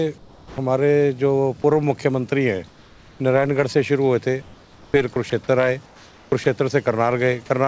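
At 0.18 to 0.58 s, 2.68 to 3.20 s and 4.42 to 4.94 s the real background gives way to flat, featureless hiss about 4 to 5 dB quieter, likely comfort noise in place of the background while transmission paused. Around 5.30 s a 20 ms scrap of sound vanishes into that same steady noise, likely sound dropped by the voice detector misjudging it as background. The comfort-noise swap returns at 5.86 to 6.32 s, and another 20 ms dropout by the voice detector follows at 6.44 s. Throughout, the G.722 call path leaves nothing above 8 kHz.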